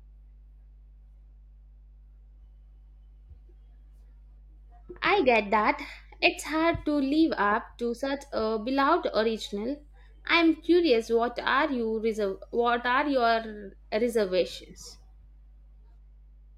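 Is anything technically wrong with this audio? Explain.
Yes. Mains hum runs through the whole clip: a ground loop or a nearby transformer is leaking the 50 Hz power line into the signal, leaving a steady low drone with some low harmonics, sitting roughly 25 dB below the speech.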